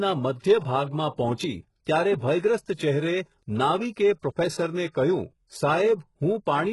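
HE-AAC compression runs through the whole of this speech clip: the audio stops dead at about 11.5 kHz, and the treble below that has a gritty, metallic edge, with s sounds turning lispy, as though the upper band were rebuilt from copied lower bands rather than carried through. The damage is heavy, and the likely cause is spectral band replication at a very low bitrate, which fits something around 12 kbps, where the synthetic harmonics no longer line up with the real ones beneath the crossover. Pre-echo appears from 3.92 to 3.97 s, a 48 ms smear of hiss arriving just before a sharp onset, and again at 4.93 s as a shorter 17 ms smear. In both places the codec has spread the quantisation noise meant for the loud attack across the quiet moment ahead of it within the same transform block, so each attack is preceded by a brief wash of noise and lands softer and blurred.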